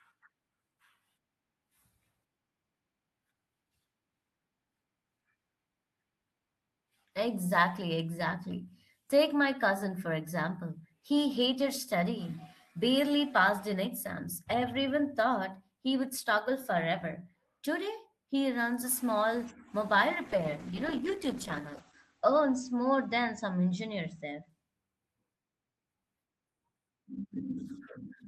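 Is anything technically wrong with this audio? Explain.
Yes. From 20.28 to 24.55 s there is a call bitrate drop. The bandwidth estimate fell, so the encoder coded far more coarsely, consistent with roughly 32 falling to 10 kbps, and cut the top from 20 kHz to 8 kHz. The speech turns muffled and rough, worst for 1.8 s, then recovers.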